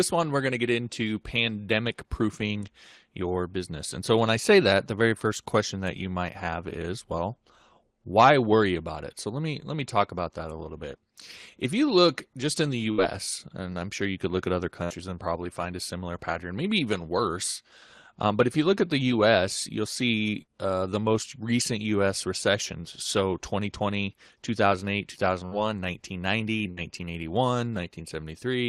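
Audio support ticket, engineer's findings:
Burst of packet loss, five times: 12.91–13.01 s (after "look just in the"), 14.84–14.93 s, 20.42–20.51 s, 25.46–25.54 s, 26.71–26.80 s. Receiver concealment holds the last sound for about 60 ms and fades it to a buzz or hiss. About 60 ms of speech is lost before playback resumes.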